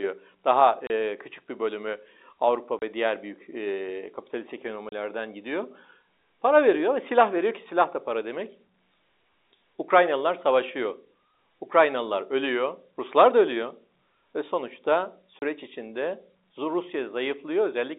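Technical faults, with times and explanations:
0.87–0.90 s, 2.79–2.82 s, 4.89–4.92 s and 15.39–15.42 s: packet loss filled with silence. The telephone-band speech drops to dead silence for 30 ms, which fits one lost packet, with hard edges rather than smoothed or repeated sound.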